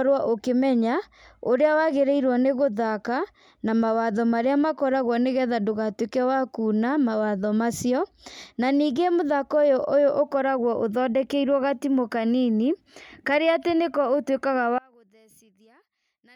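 From 14.78 s through to the end at 16.35 s, the speech suddenly drops by about 32 dB and goes faint and distant, as though most of it has been scooped out. That's the signature of one channel inverted: one side of the stereo pair has likely had its polarity flipped, so when the two are folded to mono, everything they share cancels. The centred voice and background almost disappear, leaving just a faint trace.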